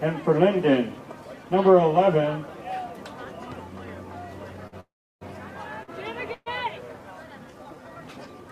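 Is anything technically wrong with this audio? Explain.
Yes. The audio has four kinds of transport and timing fault, all in its second half.

A short stall from a late packet occurs twice, at 4.67 to 4.74 s and at 5.83 to 5.90 s. Each time a packet arrived late and the jitter buffer ran dry. The receiver held the last sound to fill the wait, 48 ms the first time and 46 ms the second. Nothing is lost. A sound just hangs on briefly, with a faint buzz or dip.

A call audio freeze follows at 4.80 to 5.23 s, and a shorter one at 6.34 to 6.48 s. The sound stops and is held, then resumes where it left off. The first freeze adds 408 ms, and about 330 ms of that is silence. The second adds 124 ms, with about 20 ms of silence. The likely cause is packets held up in the network, which emptied the jitter buffer. The held sound fades out before playback picks up again.

A time-stretched section runs from 7.20 s to the end. 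It plays about 1.53 times faster, but the pitch does not change. This is likely software squeezing the audio to fit a shorter length, cutting out small pieces to keep the pitch steady. The pace jumps abruptly, and the sound turns rushed.

A jitter buffer slow-down sits inside that section, at 7.51 to 7.82 s. The receiver rebuilt its reserve by repeating single pitch periods many times in a row. This adds 54 ms and drops the pace to 85 percent, still at the same pitch. Sounds are drawn out here, and there may be a slight warble.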